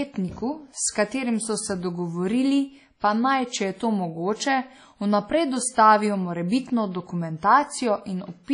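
Throughout the speech there is a washy, ringing texture with hiss that swells and fades with the signal, and nothing above 10.1 kHz. This is likely WMA compression, with long transform blocks smearing quantisation noise and dropping weak detail, which fits a low bitrate around 32 kbps.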